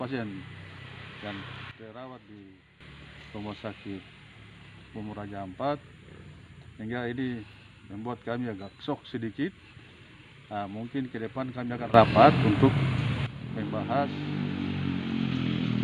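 At 1.71 s the level drops by about 12 dB in one step, until 2.81 s. At 11.94 s it rises by about 13 dB, until 13.26 s. Both are sudden gain jumps. Sound and background noise shift together, likely from gain applied without a ramp.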